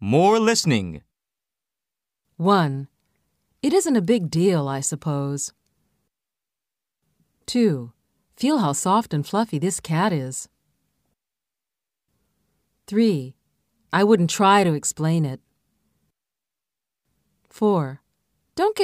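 No technical faults are audible anywhere in the recording.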